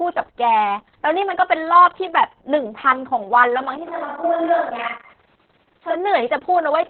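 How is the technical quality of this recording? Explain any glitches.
The technical quality is poor. Heavy Opus voice compression runs through the whole speech clip. The encoder is working in its SILK linear-prediction mode at narrowband, so the audible band stops at about 4 kHz. With so few bits for the excitation signal, each stretch is rebuilt only roughly. The sound points to a bitrate near 6 kbps, with long 60 ms frames. The result is muffled, hoarse speech with a slightly robotic edge from start to finish.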